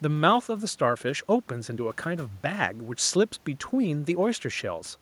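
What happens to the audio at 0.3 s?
At 0.3 s the audio is intact, with only the room's own background noise sitting well beneath the speech, about 36 dB down.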